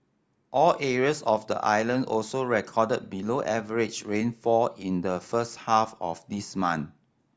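Nothing in the recording stood out as a technical problem on listening.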